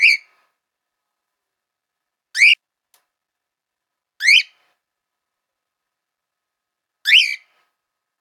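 At about 2.53 s there's a skip ahead. Roughly a second of audio was thrown away, either lost in transit or dumped by an overflowing jitter buffer while newer audio was already queued. Nothing is put in the hole, so the sound before and after the jump butts straight together, and there's no silence or fill to warn you that a chunk is missing.

Right after that, the receiver is still holding too much audio, so you get a jitter buffer speed-up. From 2.63 to 4.26 s it runs about 8% fast, shaving something like 150 ms. Then from 4.73 to 6.66 s it pushes harder, to about 16%, trimming roughly 300 ms. It does this by cutting out tiny pitch-period-sized slivers again and again, so the pitch stays put but everything feels rushed, and the second stretch is noticeably more hurried than the first.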